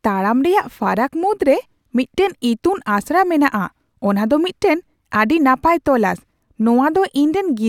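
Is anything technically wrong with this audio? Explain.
No, nothing technically wrong turns up anywhere in this speech recording.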